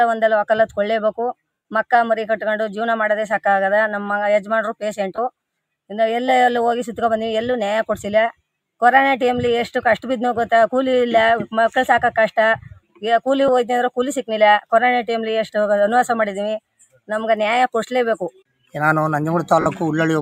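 Bluetooth LE Audio frames went missing four times, at 1.53 to 1.65 s, 5.16 to 5.18 s, 13.48 s and 19.61 to 19.66 s. The LC3 decoder patched each gap by repeating its last spectrum with scrambled phase signs, so the sound turns into a brief noisy smear. The 120 ms gap fits roughly twelve lost 10 ms frames and is long enough for the patch to fade audibly, while the 20, 10 and 50 ms gaps sound like short grainy blurs. Separately, the noise suppressor mistook parts of the wanted sound for noise and pulled them down hard: at 12.79 to 13.03 s by about 20 dB, at 16.8 to 17.09 s by about 16 dB, and at 18.31 to 18.74 s by about 21 dB. In each case a fraction of a second of sound sinks in level, and the third cut lasts longest. The light lossy compression on the clip does only slight damage.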